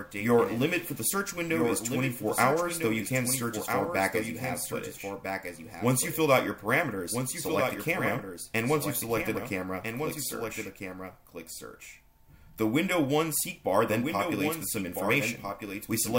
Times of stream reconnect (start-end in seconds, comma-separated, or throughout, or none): none